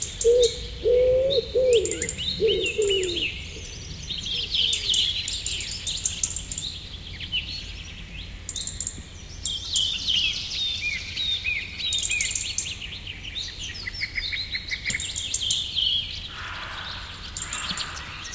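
Everyday sounds, with no technical faults to be heard.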